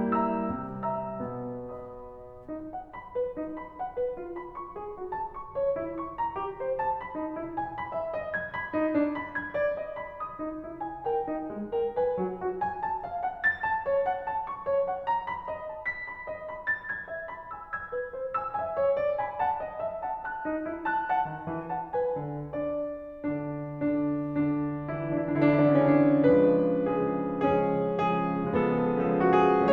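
Nothing in this stretch of music stands out as a technical fault, so there's really nothing to flag here.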